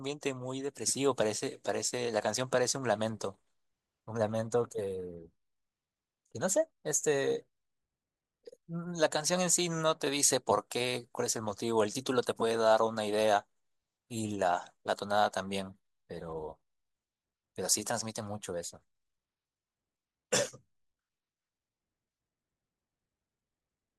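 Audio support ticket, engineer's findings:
No audible faults found on the speech recording.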